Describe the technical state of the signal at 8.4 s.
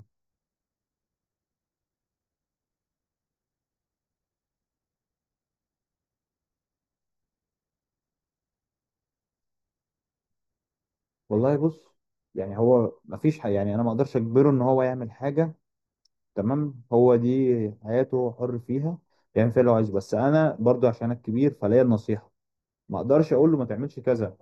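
At 8.4 s the speech carries channel delay (comb filtering) across the whole clip: one channel lags a fraction of a millisecond, so mono summing notches near 3 kHz, sounding hollow, as dark horizontal spectrogram bands.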